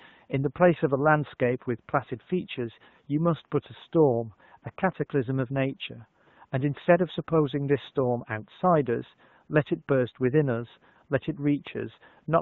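Nothing goes wrong anywhere in this speech recording. It passes through an AMR wideband (HD Voice) codec at 12.65 kbit/s, which leaves only light coding traces, and the room noise sits about 43 dB below the speech.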